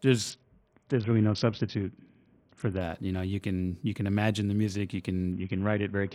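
From 0.30 to 2.81 s, and again from 5.32 s to the end of the speech, a Bluetooth SBC bit pool drop degrades the audio. The link appears congested, so the encoder cut its bit allocation, consistent with a bit pool falling from 31 to 6, about 55 kbps. The upper sub-bands lose their bits while the rest are coarsely quantised, so the treble dulls and a gritty noise rises until the rate recovers.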